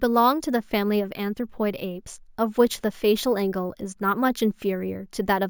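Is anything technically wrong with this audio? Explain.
Yes. Imaging from sample-and-hold upsampling runs through the whole speech clip. The rate was raised by holding each sample with no smoothing, which fits a 16 kHz source. Mirrored copies fill 8 to 16 kHz, about 21 dB down, as a metallic fizz tracking the speech.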